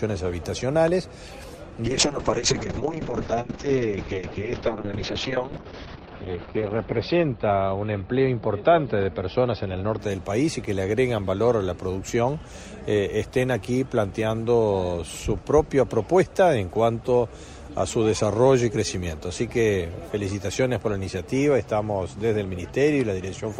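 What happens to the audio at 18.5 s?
Nothing goes wrong at 18.5 s; the audio plays through that moment intact, with no dropout, click, distortion or other audible fault.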